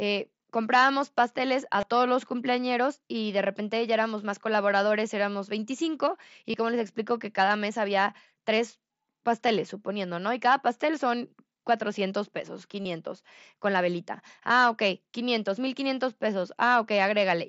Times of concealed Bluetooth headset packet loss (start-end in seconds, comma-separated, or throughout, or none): 1.80-1.83, 4.09, 6.51-6.54, 9.47, 12.82-12.85